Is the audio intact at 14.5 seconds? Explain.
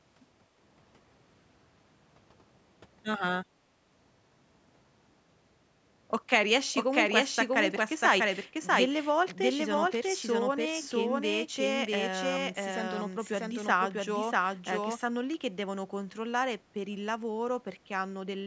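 No. From 6.74 s to 14.98 s a doubled audio track runs: a second full-band copy, about as loud and roughly 0.7 s behind, likely from a slower capture path. It sounds like an overlapping echo; spectrograms show every pattern repeated after that gap, ending abruptly.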